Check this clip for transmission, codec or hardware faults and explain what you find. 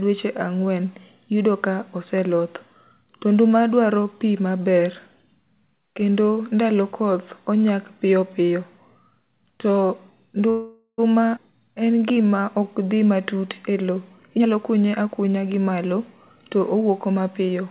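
Four kinds of network fault show up in the speech, all clustered in the second half, heard through a narrowband call path whose spectrogram stops sharply at 4 kHz, as G.711 A-law at 64 kbps would.

From 10.50 to 11.00 s there is a call audio freeze. The sound stalls for about half a second, the last sound held as a fading buzz or hiss that dies to silence for roughly 40 ms before speech resumes where it stopped. The likely cause is packets held up in transit, draining the jitter buffer so the receiver had to stretch out what it last had. Nothing is lost, but about 480 ms of delay is added. On a spectrogram the final frame's harmonics smear horizontally and fade. The waveform shows a decaying tail and a brief flat gap.

Between 11.36 and 11.39 s comes a skip ahead. Roughly 150 ms of speech is dropped, in transit or by an overflowing jitter buffer, while later packets were already queued. 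The two sides join almost directly, giving an abrupt jump. The waveform shows a sudden envelope discontinuity, and the spectrogram a vertical seam where formant tracks break.

From 11.53 to 12.95 s, ending just before "matut e", there is a jitter buffer slow-down. The receiver repeated single pitch periods to rebuild its reserve, adding about 164 ms and running the speech at 89% speed. Pitch stays put while syllables drag. On a spectrogram the formants are stretched in time with unchanged harmonic spacing. The waveform shows runs of near-identical periods.

Jitter buffer speed-up occurs twice. From 14.16 to 16.01 s the speech runs at 121%, with roughly 400 ms cut. From 16.55 to 17.62 s it runs at 107%, with about 100 ms removed. With the buffer holding more audio than its target, the receiver trimmed pitch-period pieces to cut the delay, so the speech sounds hurried, most clearly in the first stretch, at the same pitch. 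Spectrogram syllables look compressed in time. The waveform has shortened voiced segments with small splice points.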